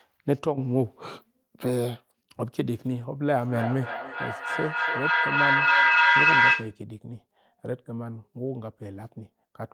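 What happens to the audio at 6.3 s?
At 6.3 s the speech is caught in feedback echo between two devices, running from 3.47 to 6.81 s. A second device replays the sound into the microphone, and each repeat, about a third of a second apart, returns thinner and ringier, building to about 8 dB above the speech. The waveform shows stacked copies; the spectrogram shows evenly spaced smears.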